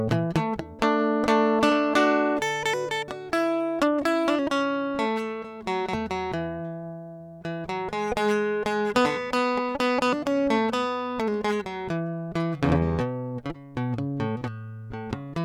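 A music recording with no audible technical fault.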